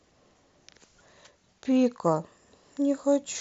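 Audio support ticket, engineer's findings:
No faults found in the speech; the audio goes through a Bluetooth mSBC headset codec path, band-limited near 8 kHz, with a light grainy texture on louder passages.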